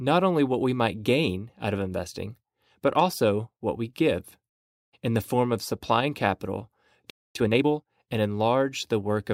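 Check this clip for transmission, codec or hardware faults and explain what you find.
Two related faults occur near the end of the speech, one after the other.

A playback stall runs from 7.10 to 7.35 s. The speech stops mid-flow and the output goes silent for about 250 ms. The likely cause is that the player ran short of incoming data, or that its output thread was held up, so nothing reached the speakers.

Time-compressed catch-up follows directly, from 7.35 to 7.85 s. Having fallen behind during the gap, the player works through its backlog. It drops small slices of audio and cross-fades the joins. This half second plays at 1.5 times normal speed. The pitch stays where it was, so the speech sounds rushed rather than higher.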